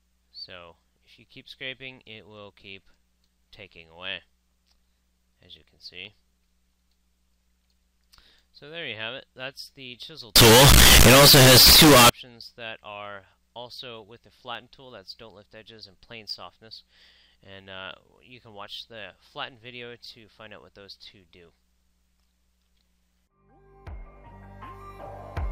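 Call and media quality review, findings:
Harsh, very loud distortion, 10.36 to 12.09 s, quiet bits as loud as everything else. Likely a signed and unsigned mix-up in the sample decode, fits 16-bit PCM. Top bit flips, every zero crossing slams across the whole range.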